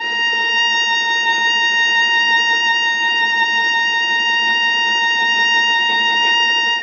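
Dull, smeared music runs the whole way through, with nothing above 6.7 kHz and a plainly audible warbling, fizzy texture on sustained tones. The likely cause is AAC compression: the encoder dropped the top band and coarsely quantised the rest, which fits a very low bitrate around 24 kbps.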